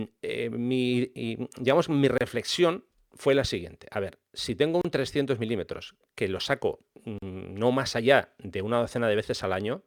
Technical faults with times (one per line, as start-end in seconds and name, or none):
0.00-9.86 sample clock jitter
2.18-2.21 gap at a join of encoded pieces
4.81-4.85 gap at a join of encoded pieces
7.18-7.22 gap at a join of encoded pieces